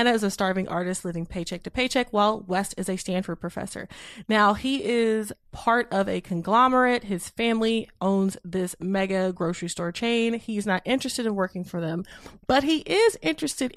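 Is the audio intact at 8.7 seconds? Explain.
Yes, at 8.7 seconds the speech is intact, with no dropout, click, distortion or other fault at that moment.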